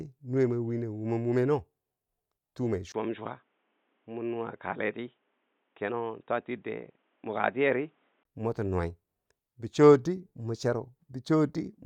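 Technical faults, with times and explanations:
2.92 to 8.25 s, input switched to a poorer device: the speech turns dull and boxy, cut off above 3.8 kHz, and clears at 8.25 s. A 20 ms gap marks the switch. Faint new background noise appears, loudness unchanged. Likely a narrower-band microphone took over.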